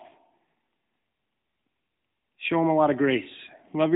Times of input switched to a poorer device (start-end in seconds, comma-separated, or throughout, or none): none